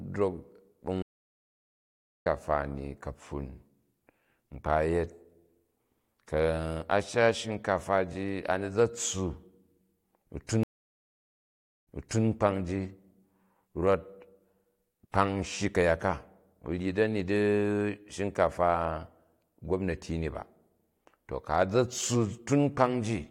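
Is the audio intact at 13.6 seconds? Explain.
Yes, at 13.6 seconds the speech plays through cleanly, with no dropout, click, distortion or other fault to be heard at that moment.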